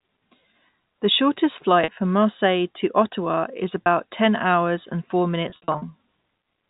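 Packet loss with pitch repetition hits at 1.84–1.88 s (40 ms), at 3.85 s before "ten hours and four", and across 5.50–5.82 s after "ten hours and four" (180 ms lost, runs up to 60 ms). Each gap is bridged by looping the last pitch period, heard as a buzzy hold that fades to silence in the longest runs. On a spectrogram the harmonics freeze into flat lines, and the waveform shows identical repeating cycles.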